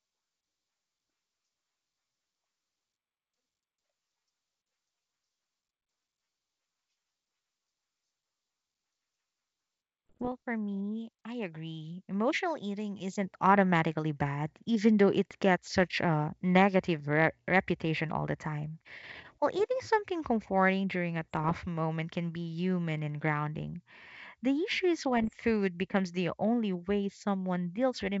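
Speech carried over a G.722 wideband link, which sounds like the full 64 kbit/s mode with just faint upper-band hiss, but it has three patches of bit errors on an ADPCM link: 10.07 to 10.29 s, 21.23 to 21.56 s, and 25.22 to 25.33 s. Each flipped bit throws the decoder's step size and predictor off, so you get pops and rough, smeared bursts with quick level jumps, which fits an error rate somewhere around half a percent in the first and last patches and about 0.3 percent in the middle one.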